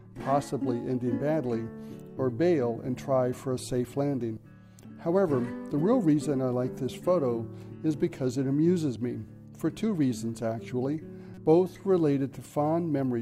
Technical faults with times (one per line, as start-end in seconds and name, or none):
4.33-4.37 damaged data in a compressed stream
11.34-11.38 damaged data in a compressed stream